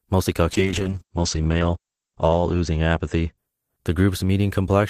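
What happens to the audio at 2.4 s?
At 2.4 s the speech sits inside a call bitrate drop (0.55 to 3.43 s). The encoder falls from 32 to 9 kbps, so the speech sounds coarse and muffled. On a spectrogram, energy above 8 kHz disappears.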